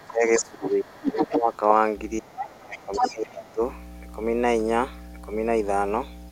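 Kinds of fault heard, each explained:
Other side's voice leaking through: at 0.0 to 0.11 s, 0.4 to 1.57 s and 2.76 to 3.51 s a second voice sits under the speech. It starts as a faint trace about 25 dB down, rises to about 5 dB below the talker, and in the last stretch is roughly as loud as the talker. This is likely loudspeaker playback of the far end reaching the microphone and getting past an echo canceller that did not remove it.
Speech suppressed in double talk: from 0.07 to 1.51 s and again from 2.2 to 3.61 s the talker's level sags and breaks up. The dips reach roughly 20 dB, covering around a second in the first stretch and a second and a half in the second. The likely cause is an echo canceller that could not separate near and far voices during overlap and turned everything down.
Mains hum: from 1.94 s to the end a steady 60 Hz tone runs under the audio, about 10 dB below the signal. 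It comes from power-line current coupling into the signal path, through a ground loop or a nearby transformer. Because the tone is locked to the mains frequency, it holds one low pitch throughout rather than wandering or changing with the speech.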